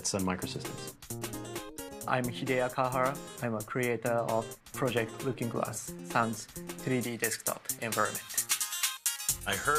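The audio runs clean until about 7.03 s, and from there to the end it has pre-emphasis left on. The top end jumps up, with 10 kHz sitting about 11 dB hot relative to 1 kHz, so the sound goes thin, bright and sibilant. The treble was lifted for recording or transmission and the matching de-emphasis cut was never applied. That shape fits a J.17 emphasis curve.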